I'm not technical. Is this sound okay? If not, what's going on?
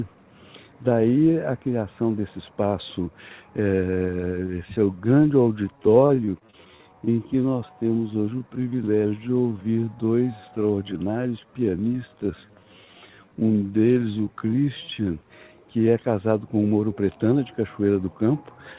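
No. From 3.82 s to 15.07 s there is a time-stretched section. The sound abruptly slows to roughly three quarters of its normal pace while the pitch stays the same. That combination is the signature of software that was likely used to stretch the audio to fill a set length, keeping the pitch steady by repeating tiny slices of the sound.

Inside that slowed stretch, from 6.06 s to 6.81 s, there is repeated packet loss, heard as a robotic sound. Over about three quarters of a second the audio breaks up into half a dozen brief holes, the longest about 33 ms. Each hole is patched by prolonging the sound just before it, so roughly a sixth of that span is filler. The result is choppy, with small pieces missing.

Throughout the clip the sound is band-limited to nothing above 4 kHz, which fits an ordinary narrowband phone-call codec and accounts for its muffled, telephone-like tone.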